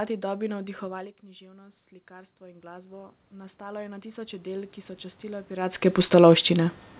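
Speech over a narrowband call path, with nothing above 4 kHz, which fits G.711 A-law. The fault is automatic gain rising: after the level drops by about 19 dB around 1.0 s as the talker moves back, the gain control slowly climbs about 20 dB from 1.39 to 6.82 s, so voice and room noise swell up together.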